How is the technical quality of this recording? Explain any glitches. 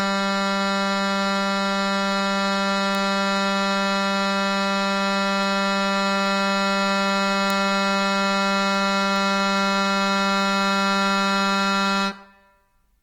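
The technical quality is compromised by audible lossy coding across the whole music clip. The damage sounds most like Opus compression, likely in its music (CELT) mode. The band energies are kept, but with too few bits the fine detail inside each band is rebuilt by folding lower bands or injecting noise. Tones come out grainy, rough and noisy rather than swirling, and the damage is plainly audible, which fits a low bitrate around 24 kbps. The bandwidth stays full, with content reaching about 20.3 kHz.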